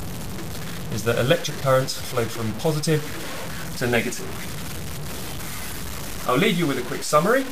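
From start to finish the sound is grainy and gritty, with a harsh distortion that tracks the signal and gets worse on quiet bits. It's likely low bit depth without dither, truncated to around 5 bits, so the error sits only about 10 dB below the signal.

Then at 1.58 to 1.62 s and again at 6.06 to 6.10 s you get quick jumbled blips. Those are chunks out of order: a 20 ms chunk plays one slot late, swapping places with its neighbour and leaving hard joins.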